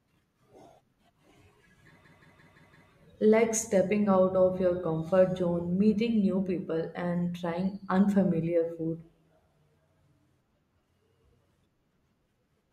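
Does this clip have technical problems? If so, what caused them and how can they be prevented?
Yes. A system hang loop runs from 2.05 s to 2.90 s. The speech stops moving forward and one 170.7 ms slice repeats five times, about 5.9 times per second. That gives a stuttering, machine-gun effect. The computer or driver stalled while the sound hardware kept replaying its ring buffer. The loop length fits an 8192-sample buffer. Little or no audio seems lost. To prevent it, fix the driver or system stall that blocks audio processing.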